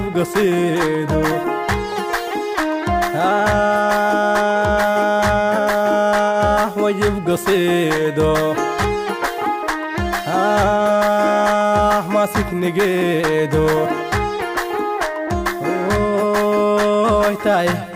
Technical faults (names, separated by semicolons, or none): none